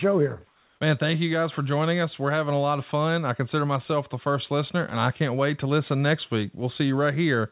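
From 0.47 to 0.80 s, about 330 ms, the real background drops out and a smooth, featureless hiss about 2 dB quieter takes its place. This is comfort noise in place of the background, likely from discontinuous transmission synthesising noise while the speech pauses.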